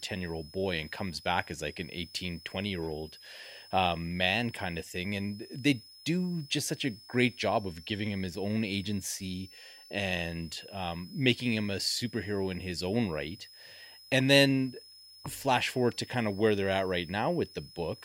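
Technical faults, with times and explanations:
Throughout, switching supply whistle: a faint tone wandering between about 5.09 and 5.31 kHz, roughly 25 dB under the speech, from a power supply cycling audibly.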